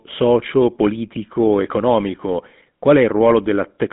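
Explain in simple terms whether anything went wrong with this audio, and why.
Throughout, the speech went through a GSM full-rate codec, an old mobile-phone voice format. Nothing above 3.8 kHz survives, and its pulse-driven voice model adds a plainly audible buzzy, gravelly roughness.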